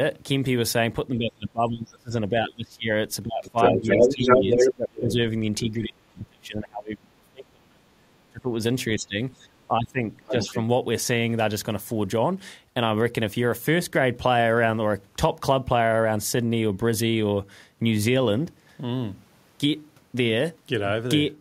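A speech recording in which the echo canceller likely could not tell the talker apart from loudspeaker echo while both sides spoke at once, so it turned everything down. The result is speech suppressed in double talk: the voice dips or drops out in pieces from 1.18 to 2.91 s, 3.23 to 8.54 s and 8.96 to 10.55 s, by as much as roughly 30 dB in the middle stretch and less deeply in the last. The canceller also likely failed to remove all of the loudspeaker signal from the microphone, so the other side's voice leaks through. From 3.45 to 4.73 s it is slightly louder than the talker, and from 10.25 to 10.57 s it is a brief scrap well below the talker.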